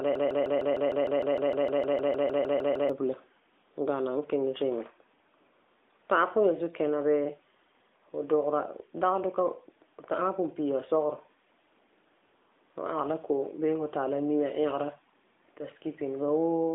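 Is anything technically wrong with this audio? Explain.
Yes. From the very start until 2.90 s, the speech is caught in a broken-record loop: a 153 ms fragment repeats back to back, 18 times, already looping when the clip begins. This likely means a stalled player, encoder or stream kept resending its last held piece, so the speech that belonged in those seconds is gone. Throughout, the sound has a telephone-narrow band of roughly 250 Hz to 3.6 kHz with only light codec coloration, consistent with an AMR narrowband mobile codec at a rate that points to 12.2 kbps.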